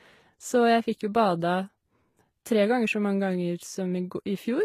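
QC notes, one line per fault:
Throughout, transcoding between lossy codecs: likely a low-rate HE-AAC encode re-encoded as Vorbis. The speech carries both codecs' artefacts together, with nothing above 14.9 kHz.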